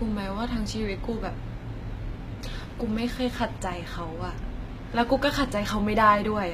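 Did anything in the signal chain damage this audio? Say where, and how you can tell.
Yes: at the codec stage, throughout the speech, the sibilants sound gritty and metallic, and there is nothing above 14.9 kHz. The likely cause is HE-AAC compression at a low bitrate, around 20 kbps, with the treble rebuilt by copying lower bands upward. A spectrogram would show blocky, repeated upper-band texture whose harmonics don't line up with those below.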